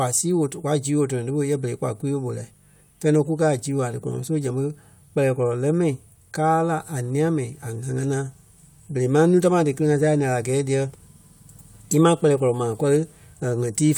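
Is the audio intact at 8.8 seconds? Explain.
Yes, the speech at 8.8 seconds is intact, with no audible fault at that moment.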